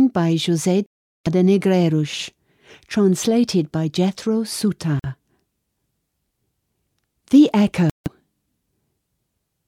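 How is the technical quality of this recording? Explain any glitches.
The speech is interrupted three times by brief total silences, most likely Bluetooth dropouts. They occur at 0.86 to 1.27 s (about 0.39 s), 4.99 to 5.06 s (about 46 ms), and 7.90 to 8.08 s (about 0.16 s). Each is a hole: the sound cuts out and returns mid-flow, as though it kept running unheard. This fits packets arriving too late at the headphones and being discarded. The gap lengths suggest runs of roughly 17, 2 and 7 lost frames.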